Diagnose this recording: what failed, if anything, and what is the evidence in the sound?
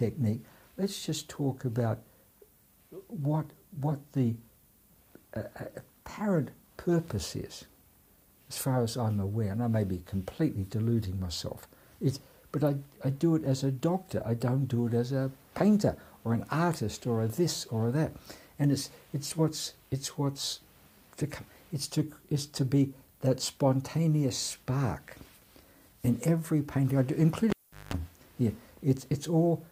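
Sample-format conversion left low bit depth with noise shaping, at 10 bits: a steady, thin hiss roughly 30 dB below the sound, climbing toward the treble.

In the analogue wiring, a cable pulled and plugged in from 27.5 to 27.94 s causes a pop, a 0.39 s dropout with 50 Hz mains buzz, then another pop.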